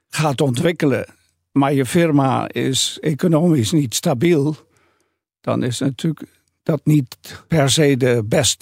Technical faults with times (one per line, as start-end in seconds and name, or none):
0.33-8.57 clock slip clicks